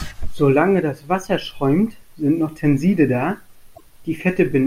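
At 3.75 s the speech skips forward, with a garbled disruption lasting until 3.81 s, roughly two 26.1 ms frames. The likely cause is a broken MP3 bit reservoir: after a cut, frames decoded borrowed bits from the wrong data. Spectrogram: disordered vertical smear; waveform: abrupt discontinuity.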